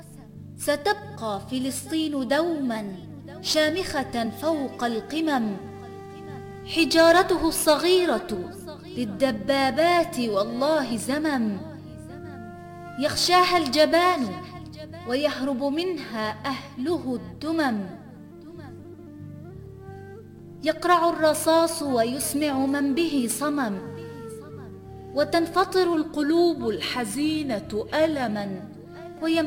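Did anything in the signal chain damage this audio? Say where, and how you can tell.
Yes. At 2.76 to 3.27 s the sound runs about 6.2% fast and jumps roughly a semitone sharp, then snaps back. At 25.94 to 28.31 s it slows by the same amount and sits about a semitone flat. That's likely a drift correction step in the driver or buffer stage, with clock-matching software yanking the playback rate to refill or drain its buffer.

There are short jumps at 4.25, 10.91 and 18.92 s, each a small jump forward of roughly 40, 70 and 20 ms. That's compressed frames skipped at the codec or storage stage. A couple of frames, then a few, then one went missing or were rejected as damaged.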